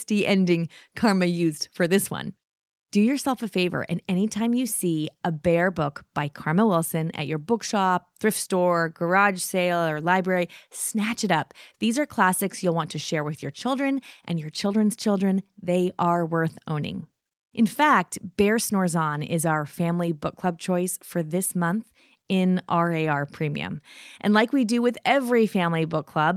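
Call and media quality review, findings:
No audible faults were found anywhere in the speech signal, with level, continuity and timing holding steady throughout.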